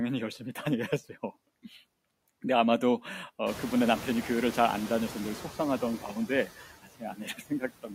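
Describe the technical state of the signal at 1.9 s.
Noise suppressor artifacts run through the whole clip, including 1.9 s. Bands judged steady noise are cut by about 18 dB, so the noise sinks between words and returns under them.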